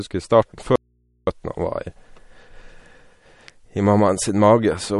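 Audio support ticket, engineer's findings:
Audio dropout to a faint residue, 0.76 to 1.27 s: input signal likely lost while the downstream path stayed live. Speech cuts abruptly for 0.52 s, leaving only mains hum about 45 dB below level.

MP3 compression, throughout: likely a starved low-bitrate encode, which fits roughly 47 kbps. Nothing above 11.1 kHz; watery, swirly speech from lines dropping in and out.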